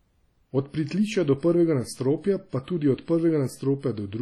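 Ringing, washy speech with a hiss that swells and fades with the signal throughout, likely from heavy WMA compression at a low bitrate, around 32 kbps.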